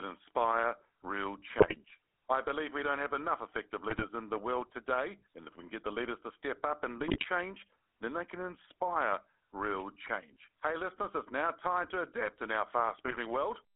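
Speech runs through the GSM full-rate codec for its entire length. A spectrogram shows energy confined to roughly 300 Hz to 3.5 kHz with nothing above. The voice has a gravelly, buzzy roughness from the coarse pulse excitation, which fits a 13 kbps full-rate GSM link. GSM bit errors break through at 1.59–1.77 s (after "inspire real"), 3.90–4.05 s (before "in the world today"), 7.01–7.26 s, 10.02–10.10 s (after "they can inspire real") and 13.06–13.19 s. Corrupted filter, pitch and gain values turn those moments into squawks and gargling pops, which show as sudden level spikes in the waveform and smeared, misplaced bands on the spectrogram.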